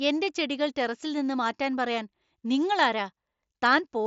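No faults are present: the speech comes over an mSBC Bluetooth headset link, so it is limited to about 8 kHz and louder moments carry the slight graininess that this codec leaves behind.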